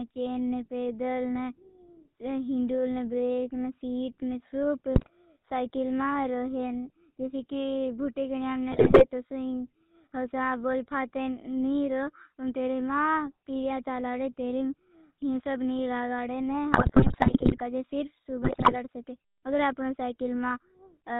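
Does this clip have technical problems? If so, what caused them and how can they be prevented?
Yes, two related problems. The whole clip is squeezed through the GSM full-rate codec, and that narrow, buzzy, gravelly quality fits the old 13 kbps full-rate coder. It models the vocal tract as a filter and drives it with a regular pulse train that keeps only a third of the excitation samples, so the fine grain of the voice turns rough. Nothing above 4 kHz survives, which is why it sounds boxed-in. To avoid it, record or route the call over a wideband path rather than legacy GSM.

On top of that there are GSM bit errors in four bursts, at 4.94–5.10 s, 8.72–9.05 s, 16.73–17.61 s and 18.42–18.76 s. The longest one, around 17 s, lasts nearly a second. Here the sound breaks into squawks, pops and gargling, which points to corrupted bits reaching the decoder at an error rate of roughly 4 percent. 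When the filter, pitch or gain parameters get scrambled, each frame is rebuilt with a warped spectrum or a level spike. A stronger radio link, or a connection with proper error protection, would prevent these bursts.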